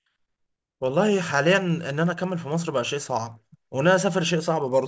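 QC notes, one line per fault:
throughout, resampler restarted on every block: each 20 ms block of a 24 kHz to 16 kHz conversion is resampled alone, leaving edge errors heard as a 50 Hz buzz with the speech.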